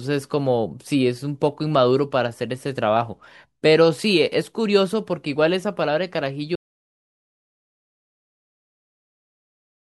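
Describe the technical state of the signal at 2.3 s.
At 2.3 s the speech is intact, with no dropout, distortion, glitch or other technical fault.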